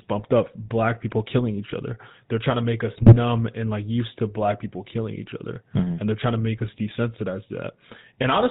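From start to finish the speech carries a GSM full-rate codec sound: a buzzy, gravelly roughness, plainly audible, from a vocal-tract model driven by sparse regular pulses at a rate that fits 13 kbps. A spectrogram shows nothing above 4 kHz and a coarse, smeared harmonic structure.

From 2.96 to 3.17 s GSM bit errors break the voice into squawks, pops and gargling. Corrupted filter, pitch and gain values warp the spectrum and spike the level frame by frame, which fits about eight damaged 20 ms frames and a heavy error rate. The waveform shows jagged level jumps, and the spectrogram shows blocky, misplaced energy.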